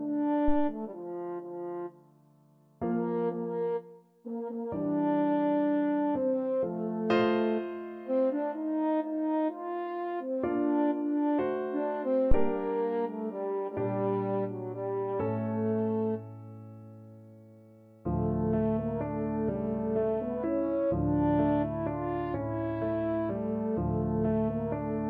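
A single deep thump breaks into the audio at 12.32 s and has died away by 12.58 s, peaking at about -12 dBFS and falling off quickly, with a decay of roughly 59 ms. This is a phantom power thump: the supply on a live input was switched, and the sudden DC step passed through the coupling capacitors into the signal path. It surfaces as that low-frequency pulse before the circuit settles again.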